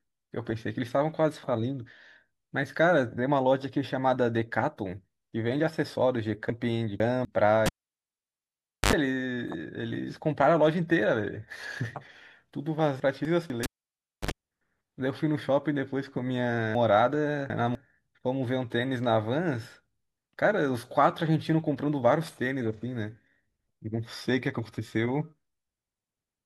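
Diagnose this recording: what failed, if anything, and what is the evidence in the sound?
Chunks out of order at the driver or buffer stage. Jumbled moments at 6.5–7.25 s, 13.0–13.5 s and 16.75–17.75 s. Late 250 ms blocks replay after later ones.

Cable pulled and plugged in on the analogue wiring. Pops, then near silence, at 7.66–8.93 s and 13.63–14.31 s. A brief 50 Hz mains buzz precedes each closing pop.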